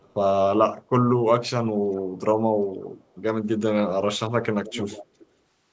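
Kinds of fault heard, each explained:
Echo leak: separate repeats of speech about 0.41 s late and roughly 15 to 35 dB below the speech, likely residue from an echo canceller; unlike reverb, these are distinct copies, not a smear.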